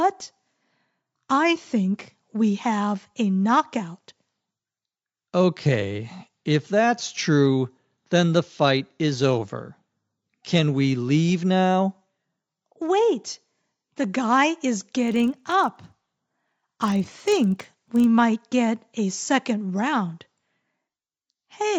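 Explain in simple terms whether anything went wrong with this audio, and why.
A resampler restarted on every block causes trouble from 15.0 to 18.04 s. The sound there carries a steady buzzy ticking at 25 per second, one tick every 40 ms. The audio was converted to a different sample rate (likely from 16 kHz up to 48 kHz) in short chunks, each handled as if nothing came before or after it. At every chunk boundary the converter guessed wrong about the neighbouring sound, leaving a tiny glitch that repeats into that buzz while sound is present.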